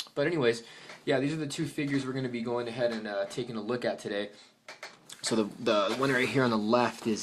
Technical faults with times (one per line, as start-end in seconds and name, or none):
none